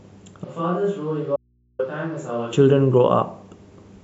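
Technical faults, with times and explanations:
0.44–2.53 s, switch to a distant microphone: The sound turns abruptly roomy and hollow, with thinner bass and a level drop of roughly 10 dB, and stays that way until an equally sudden return at 2.53 s. Room noise rises to sit only about 35 dB under the speech. This likely comes from the close microphone's feed failing or being left out, so a pickup further from the talker, such as a camera microphone, carries this stretch with much more of the room in it.
1.36–1.79 s, audio dropout to a faint residue: Inside the distant-microphone stretch, the speech cuts out mid-flow for about 0.43 s and comes back just as abruptly, with no pause or fade at either edge. The gap holds only a low mains hum, around 40 dB below the normal signal. The likely cause is the wanted signal being lost while the path after the break stayed live, so the open input's hum is all that gets through.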